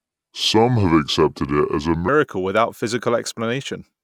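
Speech, with a section at the wrong speed from 0.0 to 2.08 s: it plays at 0.72 times normal speed, so the voice drags and sits about five semitones low until "without physical". This is likely a wrong-clock playback or edit. A spectrogram shows harmonics squeezed downward, then stepping up at 2.08 s.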